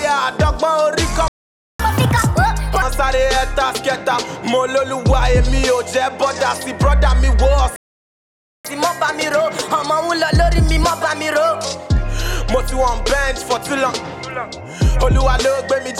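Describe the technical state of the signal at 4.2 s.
At 4.2 s the signal is intact, with no dropout, distortion, glitch or other fault to be heard at that moment.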